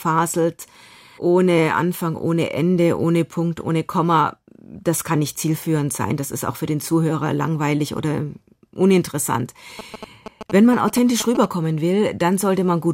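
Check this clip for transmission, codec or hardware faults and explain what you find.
One fault is present. GSM signalling bursts at 9.79 to 11.46 s, after "langweilig oder uninteressant": a nearby 2G phone's signalling bursts, rectified by the audio circuit, cause galloping ticks and 217 Hz buzzing, roughly 10 dB below the speech.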